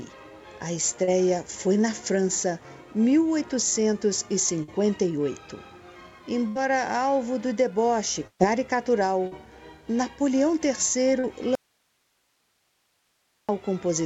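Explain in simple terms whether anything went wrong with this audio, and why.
Yes, three kinds of fault are audible. Short concealed packet loss at 1.04, 9.27 and 11.19 s: a few hundredths of a second went missing and were patched, leaving a brief smear or wobble rather than a gap.

A burst of packet loss at 4.63, 6.48 and 8.27 s sounds longer than those smears. The last sound is held and fades, and at 8.27 s it briefly goes silent before the audio resumes with a piece skipped.

An audio dropout to a faint residue runs from 11.55 to 13.49 s. The sound cuts off abruptly, and nearly two seconds of faint hiss remain. This is unlike a natural pause and is likely a lost signal on a line that stayed open.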